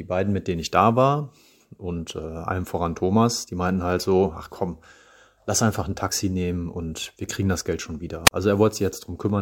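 Right near the end, from about 8.26 to 8.31 s, there's a wireless microphone squelch dropout. The RF signal from the analogue FM mic sagged far enough that the receiver's squelch shut the output. You hear a quick rise of hiss, then a hole of near silence of about 35 ms, and then the speech snaps back. The whole event is only around 55 ms, so it comes across as a tiny stutter.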